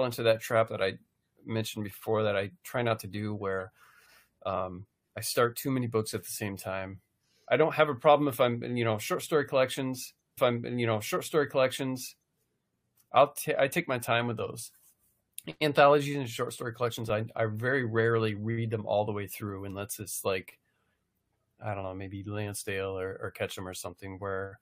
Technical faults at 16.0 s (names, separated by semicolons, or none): none